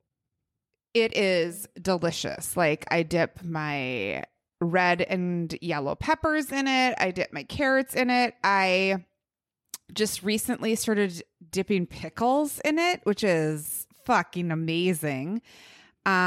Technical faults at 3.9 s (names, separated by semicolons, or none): none